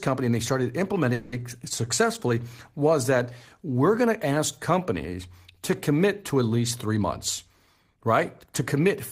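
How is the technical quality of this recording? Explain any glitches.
The recording has two network-related glitches, one early and one near the end.

From 1.13 to 1.34 s, a call audio freeze: packets were likely held up in transit, so the jitter buffer emptied. The receiver stretched the last sound into a fading buzz or hiss for about 190 ms. The speech then resumes where it stopped, with nothing lost but delayed by that much.

From 7.48 to 8.96 s, a jitter buffer speed-up: the buffer had built up extra delay, so the receiver cut many pitch-period-sized slices, around 150 ms in total. The speech plays about 8% faster at unchanged pitch and sounds hurried.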